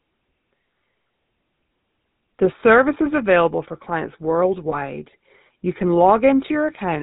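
From the start the speech carries the buzzy, gravelly roughness of the GSM full-rate codec, which fits 13 kbps; the spectrogram shows a hard ceiling at 4 kHz.

At 4.70 to 4.75 s, lost GSM frames leave a brief metallic ring, which fits one missing 20 ms frame. The decoder reuses the settings of the previous good frame.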